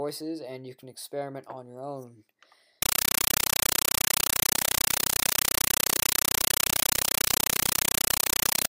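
From 2.82 s to 8.69 s the sound is replaced by a compressed stream played as audio. An AC-3 bitstream, which fits a 384 kbps Dolby Digital stream, reached the output undecoded and was reproduced as if it were ordinary samples. It is heard as harsh, very loud, chattering static. The waveform shows noise bursts about 8 ms long, separated by flat stretches of zero padding and repeating 31.25 times a second. The spectrogram shows broadband vertical stripes at the same rate.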